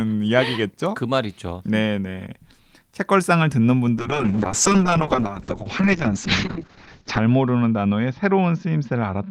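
At 3.98 s a call bitrate drop sets in and lasts to the end of the clip at 9.31 s. The call's bandwidth estimate fell, so the encoder went from 32 kbps to 6 kbps and stayed at that floor for 3.2 s. With so few bits the speech turns rough and watery, and the audio band shrinks from 20 kHz to 8 kHz, muffling it. On a spectrogram everything above 8 kHz vanishes at a flat ceiling, and detail below looks smeared and blocky. The waveform envelope barely changes.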